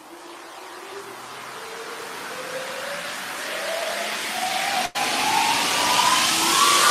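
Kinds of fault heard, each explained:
Burst of packet loss: a run of packets was lost or arrived too late around 4.85 s, so the receiver held and faded the last sound for 92 ms, then resumed with 100 ms skipped.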